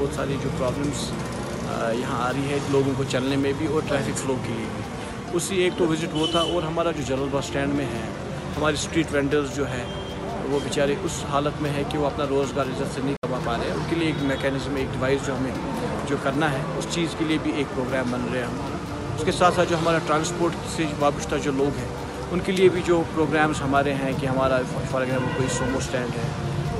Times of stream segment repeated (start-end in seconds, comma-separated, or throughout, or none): none